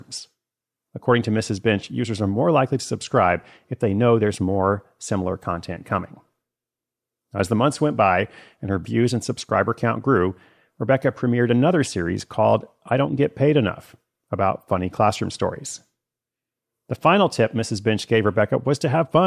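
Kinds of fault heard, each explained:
No kinds of fault are heard in this speech clip.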